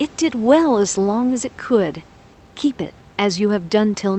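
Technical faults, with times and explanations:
The speech is carried through a call codec path whose bandwidth tops out around 8 kHz, consistent with Opus at a moderate bitrate, over a room noise floor sitting about 29 dB below the speech, and no technical faults can be heard in the signal.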